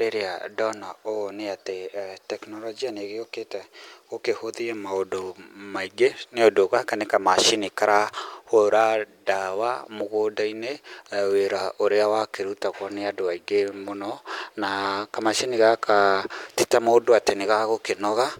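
Speech recording; no faults found on listening.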